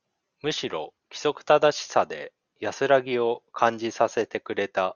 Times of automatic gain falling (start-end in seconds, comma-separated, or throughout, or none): none